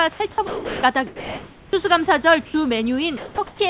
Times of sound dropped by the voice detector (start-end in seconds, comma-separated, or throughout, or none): 0.14-0.83